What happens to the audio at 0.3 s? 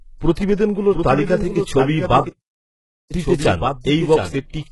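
A short burst of hiss sits in front of an attack from 0.32 to 0.37 s, smearing about 49 ms of the sound before the onset. This is pre-echo. The transform codec spread its quantisation noise across a whole block, and because the sharp attack landed late in that block, noise sized for the loud part leaked into the quiet gap ahead of it. The attack therefore arrives softened, announced by that brief hiss.

Running under this moment, as through the whole speech clip, is heavy codec damage whose likely cause is HE-AAC compression. Nothing survives above 11.5 kHz, and the treble below that limit is a rebuilt copy of lower bands shaped by a coarse envelope rather than the original content, so harmonics fail to line up across the crossover. The grainy, synthetic top end fits a very low bitrate of around 12 kbps.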